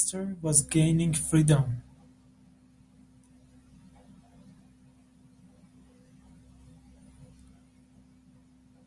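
No technical faults can be heard anywhere in this speech recording; the signal stays continuous and stable throughout.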